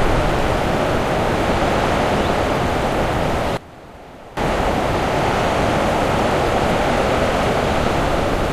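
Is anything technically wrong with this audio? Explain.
Yes, there's a problem between 3.57 and 4.37 s. The sound suddenly drops by about 19 dB, going faint before snapping back. That's the signature of one channel inverted. It's likely that one stereo side had its polarity flipped for that stretch, so when the two sides are summed, everything they share cancels out. What survives is just the difference between the channels, which is why it sounds faint.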